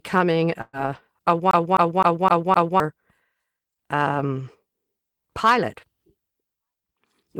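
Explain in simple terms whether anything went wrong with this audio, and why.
Two things went wrong. At 0.61 s there is a burst of packet loss. About 120 ms of audio never arrived, so the last sound is held and fades until 0.76 s, and then the audio jumps ahead. Unlike a skip, nothing is repeated. The missing part is simply gone.

From 1.51 to 2.8 s the audio behaves like a CD stuck on one turn. The same quarter-second chunk (about 258 ms) plays five times, with a tiny mute at each jump back. That fast, even, repeating stutter is what separates it from a dropout.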